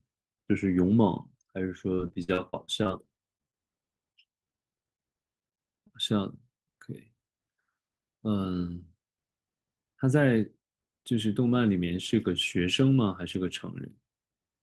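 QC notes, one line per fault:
1.95–3.55 s, repeated packet loss (robotic sound): twelve separate gaps, the longest about 46 ms, with roughly 260 ms of speech missing in all. Each hole is bridged by extending the preceding sound, so about 18% of the stretch is synthetic fill, giving a choppy, robotic texture.
3.21–3.89 s, jitter buffer slow-down: the receiver stretches playback to rebuild its reserve, adding about 68 ms so the passage runs at 91% speed. Pitch stays put while sounds are drawn out, repeated pitch periods giving a slight drag.
4.13 s and 4.44–4.50 s, short concealed packet loss: two 20 ms holes, each patched by continuing the last sound before blending back. Both register as brief smears or wobbles, and the second adds roughly 15 ms to the length.
5.40–5.91 s, repeated packet loss (robotic sound): four gaps, the longest about 19 ms, around 80 ms missing and 14% of the span concealed. 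The repeated patching again produces a short burst of choppy, robotic sound.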